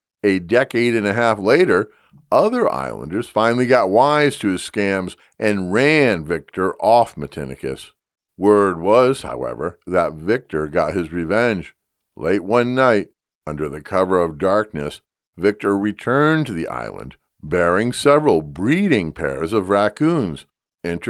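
Lost packet rebuilt from error correction, 17.47 to 17.49 s, between "returned to the island" and "several breeding pairs of". About 20 ms of audio, consistent with one lost packet, went missing. The packet that followed carried a low-bitrate backup copy, and the decoder played that instead, so the speech has no gap or dropout. The brief rebuilt stretch is coarser and noisier than the surrounding speech, a small grainy blip.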